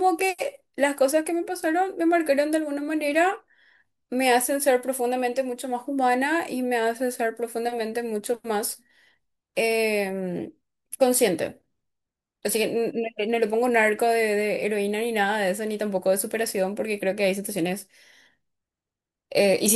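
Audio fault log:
No audible faults detected.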